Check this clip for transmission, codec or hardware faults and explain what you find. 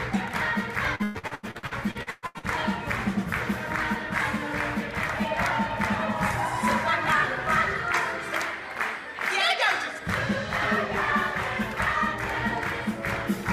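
One transmission fault is present: repeated packet loss (robotic sound) from 0.95 to 2.46 s. Thirteen losses arrive in quick succession, the longest 121 ms. Each hole is filled by extending the preceding sound, so about half this stretch is synthetic fill. It sounds choppy, with pieces missing. On a spectrogram, smeared, frozen harmonic bands alternate with fresh detail; the waveform shows repetitive, periodic segments.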